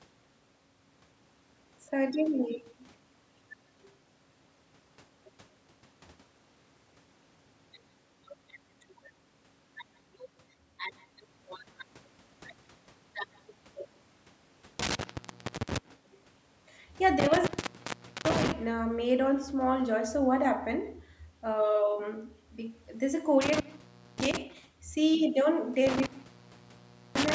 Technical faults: echo with no canceller; intermittent contact

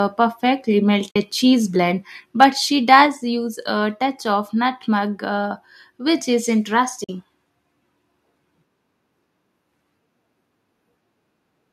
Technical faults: AAC frame loss with muting; microphone overload; microphone volume stepped down

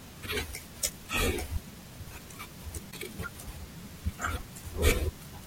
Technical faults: compressed frames skipped

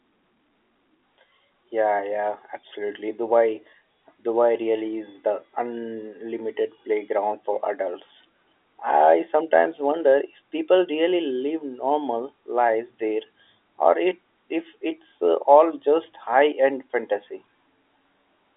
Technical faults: none

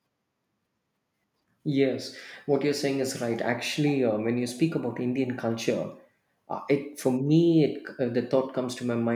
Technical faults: none

